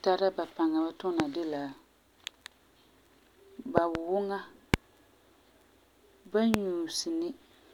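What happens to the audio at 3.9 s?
A loud pop hits the speech between 3.78 and 3.97 s. Two sharp pops sound in quick succession, roughly 25 dB above the speech, which carries on underneath. A sudden voltage pulse, likely from a plug, switch or static discharge, entered the signal path.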